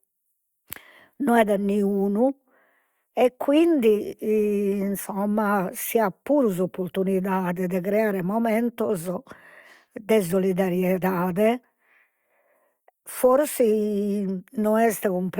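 No technical faults are audible.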